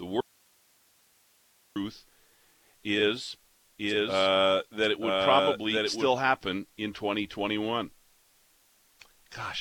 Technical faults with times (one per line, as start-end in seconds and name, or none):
0.21-1.76 audio dropout to a faint residue
3.78-6.08 doubled audio track